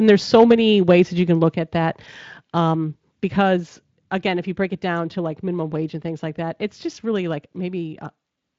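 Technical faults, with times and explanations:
0.08 to 0.52 s and 0.89 to 0.92 s, microphone overload: the input level was likely set too high, driving peaks about 4 dB and then about 3 dB past the converter's ceiling. The tops of the loudest waveforms are flattened, roughly a few percent of samples in each stretch, so the strongest syllables at the start and just before "that you can" gain a harsh, crackling edge.
0.52 s, 1.53 s and 3.6 s, microphone volume stepped down: the call software, likely reacting to the clipping, cut the device's input gain in single jumps of about 3 dB, about 5 dB and about 3 dB. The first drop follows directly on the overloaded opening. The second falls between "that you can" and "at that um", and the third comes just before "again if you break". Each time, voice and background fall together abruptly rather than fading.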